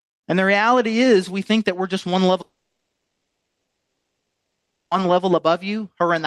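Just after "that we're just one", at 2.41 s, the speech breaks off and stays gone until 4.96 s, a gap of about 2.5 s. A brief smeared buzz continues the last sound for less than a tenth of a second, then nothing but silence remains. This is a long network dropout, likely caused by audio failing to arrive for that whole stretch. Unlike a short packet loss, the concealment gives up almost at once, and speech resumes further on with the missing portion simply absent rather than delayed.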